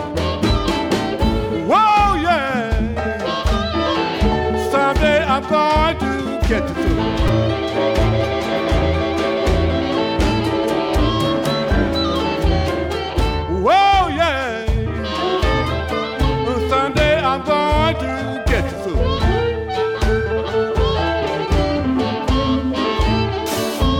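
At 7.28 s new audio missed its deadline, so a repeated buffer of about 5 ms played three extra times, giving a brief buzzy click with nothing lost.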